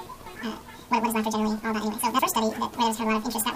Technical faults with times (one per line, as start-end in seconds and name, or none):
0.00-3.56 wrong sample rate